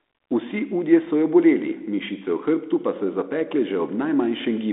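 No technical faults are audible.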